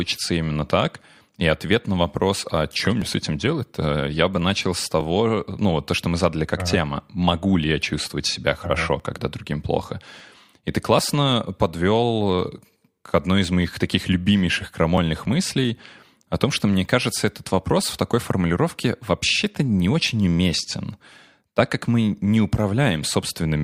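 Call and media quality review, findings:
Overlap between stream segments: skips at 3.02, 5.01, 9.00, 10.99 and 14.98 s, before "ну вот то что" at 5.01 s. Segmenter/player trims 2 to 4 ms at 2 s segment boundaries, causing waveform jumps.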